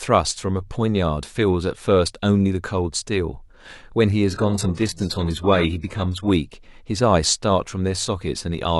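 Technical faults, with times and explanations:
4.3 to 6.3 s, adaptive stream at a lower bitrate: the speech abruptly turns swishy with codec artefacts, then snaps back with no gap. That fits the player briefly switching to something like a 12 kbit/s HE-AAC rendition while the connection dipped.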